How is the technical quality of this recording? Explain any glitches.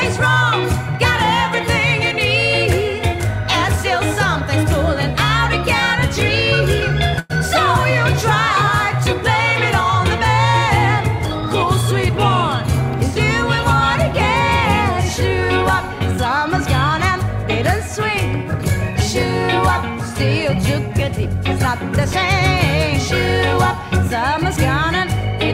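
The recording has two timing glitches, one brief stall and one short stretch of slightly rushed playback.

From 7.19 to 7.32 s the sound stops moving forward and is briefly stretched into a fading buzz or hiss for about a tenth of a second before carrying on. This is a call audio freeze, likely caused by delayed packets leaving the jitter buffer empty. The receiver filled roughly 102 ms by continuing the last sound, then resumed where it left off, so nothing is lost. The stream simply runs that much later afterwards.

Between 15.40 and 18.12 s the audio plays about 1% fast while keeping its pitch, which is too slight to give a hurried feel or an obvious jump. This jitter buffer speed-up happens when the buffer holds more audio than its target. To bring the delay back down, the receiver repeatedly trims tiny pitch-period-length slices, removing around 40 ms in total across those few seconds.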